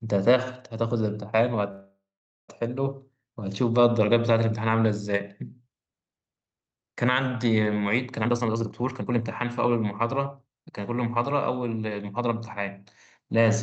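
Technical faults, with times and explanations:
1.71–2.50 s, call audio freeze: delayed packets likely emptied the jitter buffer, so the last sound fades into about 0.47 s of silence, then resumes without loss.
8.22–10.81 s, jitter buffer speed-up: the overfilled buffer trims pitch-period slices, around 0.7 s in all, so speech runs at 130% speed with unchanged pitch.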